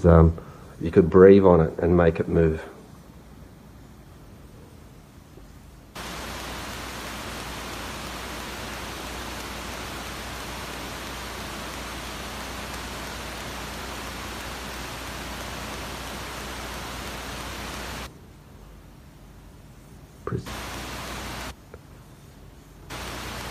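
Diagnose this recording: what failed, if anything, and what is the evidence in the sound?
Nothing failed: the recording shows no fault at any stage, and there is no evidence in the sound of anything having gone wrong.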